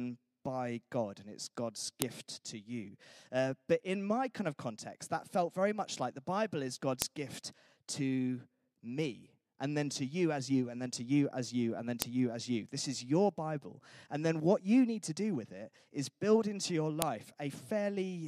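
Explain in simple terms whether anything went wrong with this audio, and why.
File header played as audio: sharp, loud clicks at 2.02, 7.02, 12.02 and 17.02 s, exactly 5 seconds apart. The speech was joined from 5-second pieces, and each piece's file header was left in and played as sound. Those few bytes become a snap at each join. You can hear it just before "to you", between "as you and then" and "you as you", and right after "is build into your".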